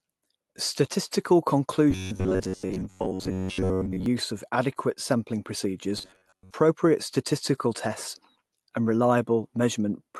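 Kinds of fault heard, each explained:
Clock drift between sender and receiver: The sender's clock runs about 4 percent faster than the receiver's. Audio piles up in the jitter buffer. The receiver has to keep discarding small pieces to catch up, so slight timing hiccups recur at uneven intervals throughout.
Repeated timing corrections: From 0.05 s to 9.80 s, the receiver keeps trimming short pieces to match the faster sender. The net effect is playback at 104 percent speed. Each cut is small, heard as a faint stumble or an unsteady pace.
Robotic sound from repeated short buffers: From 1.91 s to 4.06 s and from 5.98 s to 6.54 s, the speech turns into a rigid metallic buzz at 93.8 Hz. The likely cause is the last 10.7 ms looping to cover most of the stretch while real audio is skipped.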